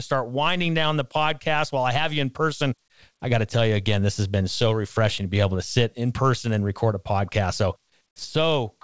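No faults are present in the speech; the call path is audible only as a top end that stops at 8 kHz, consistent with a wideband G.722 link.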